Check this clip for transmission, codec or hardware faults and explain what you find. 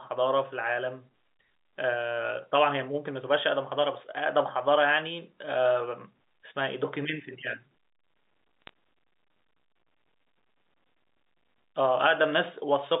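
One transmission fault stands out, a short burst of bit errors on a digital phone line at 8.62 to 8.69 s. The speech runs through G.711 telephone coding, with content held to roughly 200 Hz to 3.7 kHz. Within that 70-ms stretch, a few bits in the 8-bit logarithmic samples arrive flipped, at a low error rate of around one in a thousand. Each flip rewrites a single sample, and when the sign or a high-order bit is hit, that sample jumps far from its neighbours. The result is sharp ticks, a brief crackle laid over speech that carries on unchanged. On a waveform these show as isolated one-sample spikes; on a spectrogram, as thin vertical lines spanning the whole band.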